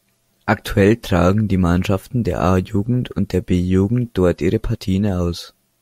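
At 4.75 s, right after "dort ihre", the speech jumps forward, most likely a dropped buffer (overrun): the program didn't grab its samples before the hardware overwrote them, so roughly 10 ms vanished and the two sides were spliced together with no gap.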